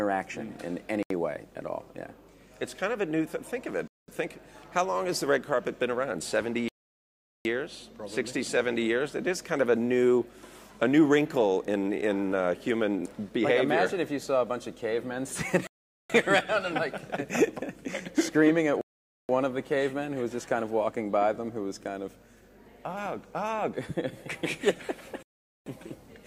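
The sound drops to dead silence six times, at 1.03 s (76 ms), 3.88 s (0.21 s), 6.68 s (0.77 s), 15.67 s (0.43 s), 18.81 s (0.48 s) and 25.23 s (0.44 s), then resumes. These gaps are likely Bluetooth stalls, where delayed packets leave the headphone buffer empty until retransmissions arrive.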